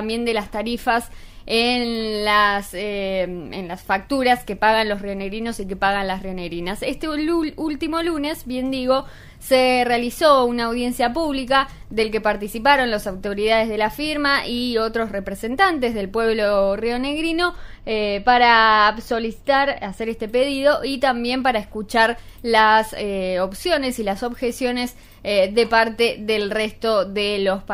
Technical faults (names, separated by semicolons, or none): channel delay (comb filtering)